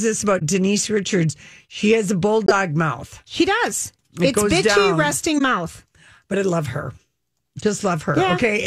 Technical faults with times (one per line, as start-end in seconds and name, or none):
0.39-0.42 corrupt frame concealed
2.46-2.51 corrupt frame concealed
5.36-5.41 corrupt frame concealed